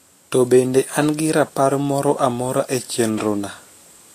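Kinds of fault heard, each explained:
Vorbis compression: throughout the speech nothing sounds above 14.2 kHz, and the treble turns plainly hissy and grainy. This is likely a low-quality Vorbis encode, whose coarsely quantised residue swaps fine detail for noise of similar energy, which fits a bitrate near 37 kbps.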